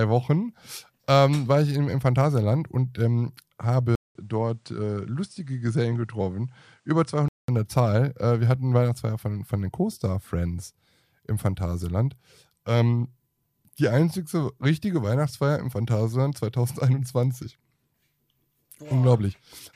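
At 3.95 s the speech drops out for 200 ms, then returns duller and a few dB quieter, with nothing above 10.5 kHz and a faint new noise floor far below the signal. At 7.48 s the fuller sound comes back. This is most likely the input switched to a poorer device. A filter or bitrate drop would not change the level and background noise or leave a gap at the switch.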